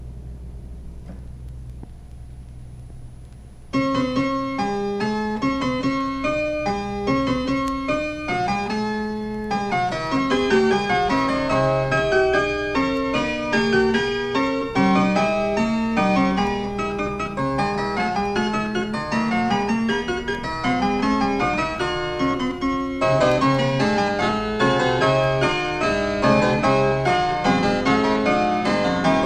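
No technical faults are audible.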